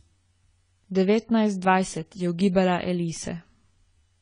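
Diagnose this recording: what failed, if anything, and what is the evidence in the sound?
AAC compression damage runs throughout the speech, from start to finish. The fault sits at the codec stage: nothing is present above 10 kHz, and the artefacts are plainly audible, with dull, smeared sibilants and a warbling, fizzy texture on sustained sounds. This is likely a low-bitrate AAC-LC encode, consistent with something near 24 kbps. Too few bits for each frame force the encoder to drop the top band and quantise the remaining spectrum coarsely.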